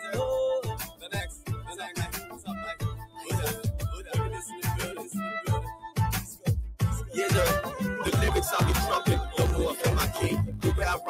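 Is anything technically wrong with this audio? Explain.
Yes. A speech-oriented noise suppressor has been left on throughout, which is a noise suppressor applied to music or sounds. It treats steady tones, ambience and decays as noise. Level swings by around 10 dB as attacks pass while sustained material sinks, producing pumping and thinning.

The sound cut by the noise suppressor shows up in five stretches, where held or fading material dips below its surroundings while sharper onsets survive:
0.67–2.54 s, about 15 dB deepest drop
2.75–3.32 s, about 16 dB
4.47–4.65 s, about 6 dB
4.97–5.12 s, about 7 dB
5.72–5.97 s, about 15 dB

From 8.02 s to the end there is a block size mismatch (truncated). One stage writes longer blocks than the next reads, and each block's tail is discarded. This produces a 50 Hz buzz at the block rate and makes the audio run 1.07 times fast, which fits 1024-sample written blocks.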